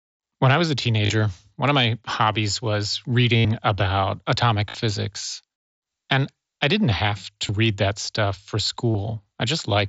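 Concealed Bluetooth headset packet loss hits at 1.06–1.10, 2.33–2.35 after "one of my", 3.37–3.45 before "about atomic", 4.69–4.75, 7.47 between "I didn't have" and "read that stuff for", and 8.91–8.95. Lost packets get papered over by repeating recent waveform, so you hear brief buzzy held tones. The 82 ms one at 3.37 is the longest, with a slight warble as the speech comes back.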